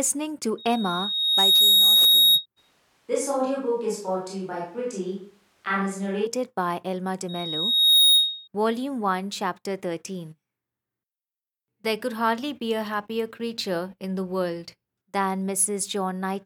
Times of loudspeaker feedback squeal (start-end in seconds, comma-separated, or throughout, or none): 0.58-2.46, 7.28-8.48